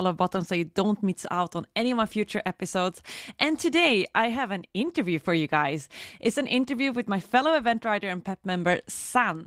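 At 0.35 to 0.45 s and at 4.85 s, lost packets were rebuilt from error correction. Low-bitrate copies fill each gap. The speech turns briefly rough and noisy.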